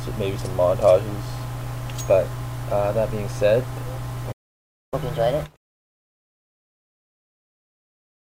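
At 4.32 s the sound cuts out in mid-flow. This is a playback stall. Silence lasts about 0.60 s, until 4.94 s. The player likely ran out of buffered data or had its output thread blocked. The sound then resumes where it stopped.

From 4.94 s to 7.34 s comes catch-up at higher speed. The player works through its backlog at 1.25 times normal speed. Pitch rises by about four semitones along with it. At 7.34 s both speed and pitch drop back to normal.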